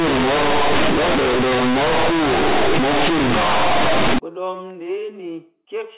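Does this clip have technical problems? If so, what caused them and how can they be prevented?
Yes. From 0.0 to 4.19 s the speech is companded audio read as linear. Mu-law bytes play as raw 8-bit samples without expansion. Quiet sounds blow up to full size, giving loud buzzy distortion and noisy pauses. Prevent it by decoding G.711 mu-law before playback.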